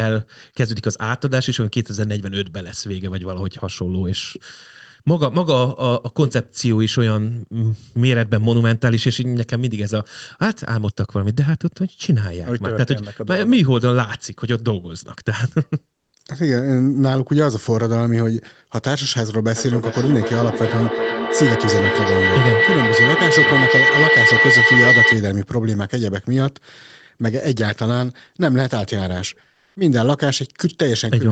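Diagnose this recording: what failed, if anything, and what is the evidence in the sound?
The big one is feedback howl, from an acoustic loop in the call. From 19.56 to 25.33 s a tone around 2 kHz builds until it peaks about 4 dB above the speech, pulsing roughly every 0.4 s. Each pass from loudspeaker to microphone came back louder than the last.

The second is comfort noise in place of the background, at the codec stage. For 220 ms, 29.53 to 29.75 s, the real room tone drops out for flat, featureless hiss with a level shift of about 10 dB. That's likely discontinuous transmission in the encoder, consistent with Opus DTX.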